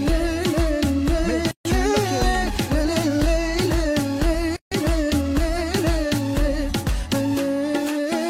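At 1.51 s the sound drops into a silence of about 140 ms, then again at 4.56 s for about 150 ms. That's a gap at a join of encoded pieces: encoder start delay and last-frame padding were left in, so the silence has smeared edges and the sound resumes where it stopped.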